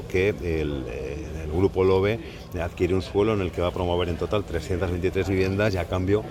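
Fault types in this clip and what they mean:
Compressed frames skipped: At about 1.24 s and again at 5.31 s the audio jumps forward by roughly one 10 ms frame, because that piece of the encoded stream never reached the output, either missing or rejected by the decoder as damaged. Unlike a dropout, there is no gap of silence, and the audio then carries on slightly ahead.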